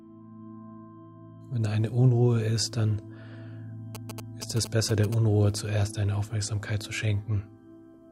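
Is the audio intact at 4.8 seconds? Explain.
No. At 4.8 seconds the audio carries GSM signalling bursts, which run from 3.95 to 5.14 s. A nearby 2G phone is exchanging short radio bursts with the network. The audio circuit rectifies that radio energy into the signal. It comes through as a galloping dit-dit-dit of short buzzes at 217 Hz. It sits roughly 10 dB below the wanted sound.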